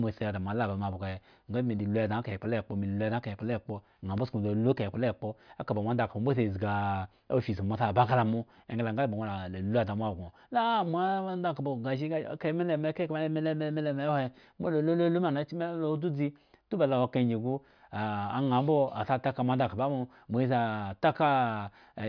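No technical faults are audible anywhere in the recording.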